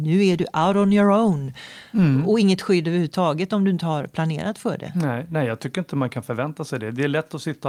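Nothing in this speech recording stood out as a technical problem on listening.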